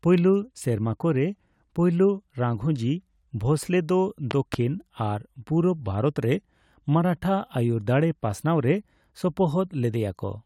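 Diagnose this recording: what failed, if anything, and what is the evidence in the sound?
A loud pop, a double one, sits between 4.31 and 4.56 s, two sharp thumps standing around 15 dB above the speech, which carries on underneath without a gap. That continuity separates it from a dropout or buffer glitch, where the audio itself would break. The likely cause is an electrical pulse in the analogue wiring, such as a plug, switch or static discharge, added to the signal and briefly shaped by the circuits downstream.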